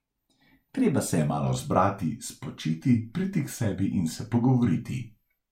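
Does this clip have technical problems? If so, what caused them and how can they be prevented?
Yes. From about 1.18 s to the end, the speech slows and drops in pitch, a wrong sample rate fault. Audio captured at 48 kHz is being played back as if it were 44.1 kHz, with no resampling in between, so everything runs at about 0.92 times speed and sits roughly one and a half semitones flat. Voices come out a bit heavy and sluggish. To prevent it, make sure the playback path either matches the file's rate or resamples it properly.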